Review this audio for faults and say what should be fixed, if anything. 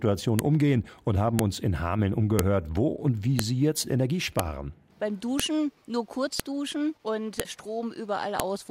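A sharp, loud click recurs once per second, from about 0.39 s through 8.40 s, nine in all. This is the file header played as audio. The stream appears to be built from 1-second WAV pieces joined without stripping each piece's header. Those few dozen bytes of metadata are read as sample values, producing a brief snap at every boundary regardless of the surrounding sound. To prevent it, parse and discard each chunk's header before concatenating or streaming the raw sample data.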